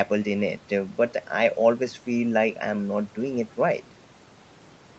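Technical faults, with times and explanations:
No technical faults can be heard in the speech. The call codec's bandwidth leaves nothing above 8 kHz, and its coding noise sits at the level expected for a call path.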